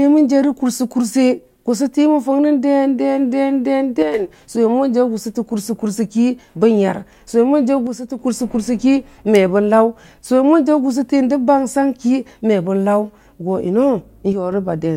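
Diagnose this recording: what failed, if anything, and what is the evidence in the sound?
The speech level drops suddenly by about 6 dB three times, from 4.02 to 4.14 s, 7.87 to 8.19 s, and 14.33 to 14.52 s, then snaps straight back. This fits one channel drops out, likely at the analogue wiring stage, such as a loose stereo connector. With one side gone, the mono sum keeps only half of the shared signal. On a waveform, the envelope steps down to half height with square edges. A spectrogram shows a uniform dimming across all frequencies, not a filtered band.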